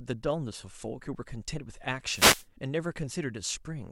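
At about 2.08 s there's a wireless microphone noise hit that lasts until roughly 2.47 s, so a bit under half a second. What's going on is the FM radio link from the mic dropping into a fade, where reflected copies of the signal arrive out of step and partly cancel the direct one. As the wanted signal sinks, the receiver's own noise comes up, and you get that brief swish of static laid over the speech before the link recovers.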